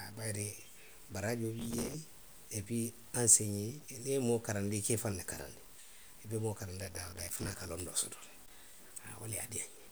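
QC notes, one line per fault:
throughout: low bit depth without dither, likely 8-bit truncation. Grainy distortion sits roughly 25 dB under the speech and follows its level, so quiet tails turn gritty rather than hissing steadily.
1.60–1.94 s and 6.81–7.69 s (between "I be moo karanndi" and "londoo soto le"): processor overload crackle. Very short buffers repeatedly replay stale audio with hard edges, giving bursts of tearing that stop when the load passes, unlike the constant grain.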